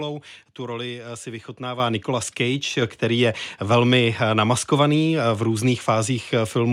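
At about 1.8 s, right after "roli si", the microphone volume stepped up: input gain jumped roughly 8 dB at once, so voice and background both get suddenly louder.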